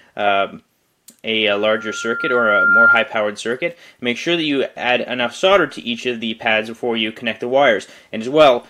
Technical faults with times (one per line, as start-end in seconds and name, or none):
1.50-3.11 loudspeaker feedback squeal